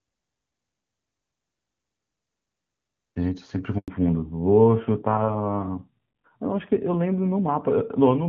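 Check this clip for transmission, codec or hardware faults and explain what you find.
Two faults show up, both at the same moment, with the call sounding clear HD Voice wideband before it. At 3.78 s there's a handover gap: the call jumps networks, no frames arrive, and the sound cuts to silence for 100 ms. From 3.88 s to the end, the fallback to narrowband kicks in. Everything above 4 kHz disappears, so it sounds duller and rougher, which fits a drop to a low-rate narrowband AMR codec.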